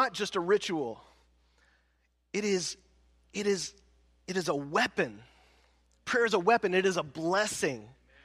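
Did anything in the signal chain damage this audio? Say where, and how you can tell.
No, nothing in the signal chain audibly damaged this speech recording, and the signal arrives intact at every stage from capture to playback.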